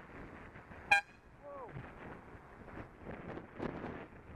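Overlap-add ripple runs throughout the clip, from start to finish. The audio was split into windowed frames and rebuilt with an overlap whose windows do not add up to a steady gain, so the level dips and swells once per frame, by about 6 dB. That swing repeats at around 150 times a second, too fast to hear as separate pulses. Instead it comes across as a metallic buzz, with extra tones around each note, laid over the whole sound.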